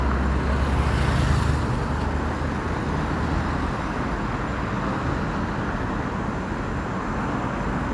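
Nothing goes wrong anywhere in this recording of sounds; there's no technical fault to point to at any moment.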